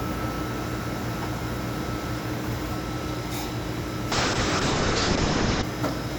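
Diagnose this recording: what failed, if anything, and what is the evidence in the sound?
The failure is a call bitrate drop at the codec stage, driven by the network bandwidth estimate. From 4.12 s to 5.69 s the sound turns coarse and watery, and the top end collapses from a full 20 kHz band to about 8 kHz, leaving it muffled. The worst stretch lasts about 1.5 s. The change points to the encoder being cut from roughly 96 kbps to 6 kbps, starving it of bits until the estimate recovered.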